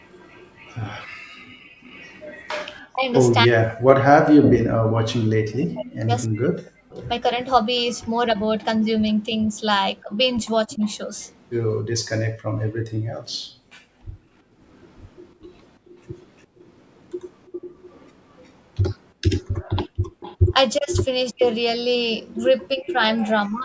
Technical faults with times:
0.00-11.36 echo leak
1.08-1.83 background gated by the echo canceller
2.90-6.98 speech suppressed in double talk
10.03-10.81 speech suppressed in double talk
12.37-14.60 background gated by the echo canceller
14.68-23.27 echo leak
19.89-20.49 background gated by the echo canceller
20.77-23.65 speech suppressed in double talk

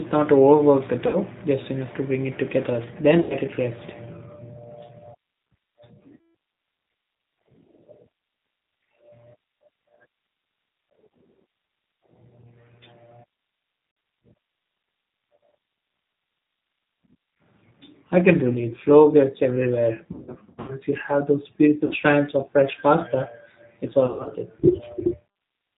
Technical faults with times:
0.00-25.77 G.729 codec
1.07-1.17 VoIP packet loss concealed by the speech codec
3.22-3.35 VoIP packet loss concealed by the speech codec
6.17-6.23 VoIP packet loss concealed by the speech codec
13.91-13.97 VoIP packet loss concealed by the speech codec
18.53-18.61 VoIP packet loss concealed by the speech codec
20.12-20.75 VoIP packet loss concealed by the speech codec
21.85-21.94 VoIP packet loss concealed by the speech codec
24.06-24.30 VoIP packet loss concealed by the speech codec

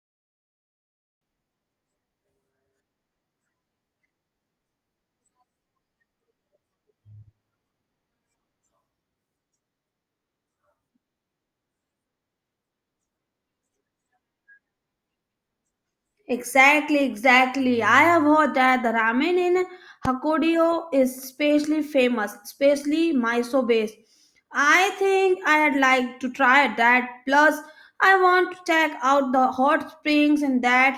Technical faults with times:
20.05-20.08 loud pop

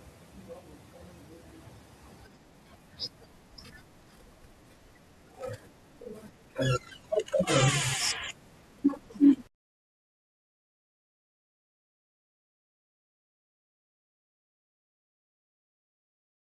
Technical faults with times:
3.64-3.70 repeated frames

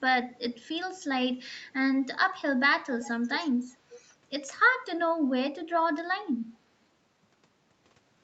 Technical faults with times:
2.97-3.11 echo leak
3.94-3.99 echo leak

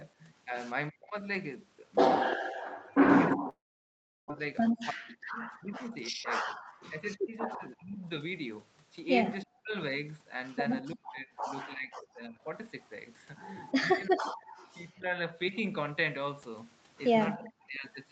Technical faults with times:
0.90-1.16 speech suppressed in double talk
2.30-3.36 echo leak
2.42-2.65 background gated by the echo canceller
2.93-15.20 speech suppressed in double talk
3.49-4.32 long network dropout
4.39-7.00 jitter buffer speed-up
14.41-15.57 echo leak
17.35-17.87 speech suppressed in double talk

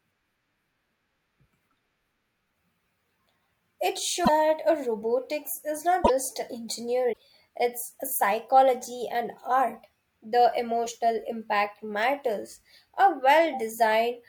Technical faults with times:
4.24-4.29 broken MP3 bit reservoir
6.04-6.10 broken MP3 bit reservoir
7.12-7.18 broken MP3 bit reservoir

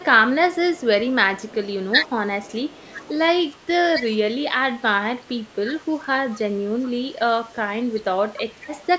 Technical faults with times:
0.00-3.57 echo leak
0.15-0.74 speech suppressed in double talk
3.59-8.05 speech suppressed in double talk
8.61-8.67 echo leak

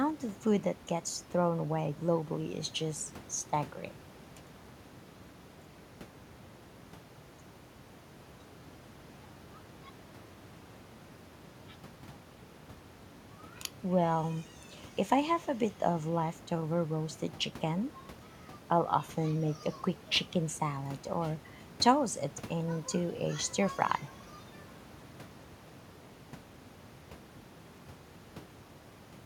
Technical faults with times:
none

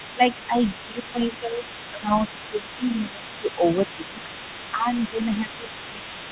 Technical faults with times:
0.00-6.32 other side's voice leaking through
0.14-4.29 speech suppressed in double talk
4.72-6.32 speech suppressed in double talk

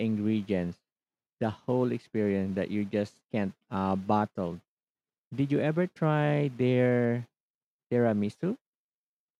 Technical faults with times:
none

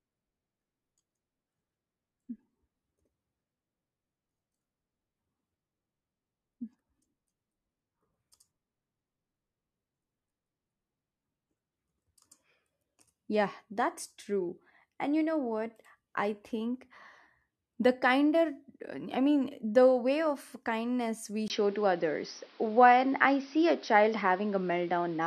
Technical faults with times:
21.48-25.27 input switched to a poorer device

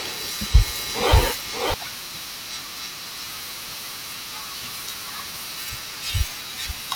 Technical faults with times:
0.00-1.74 doubled audio track

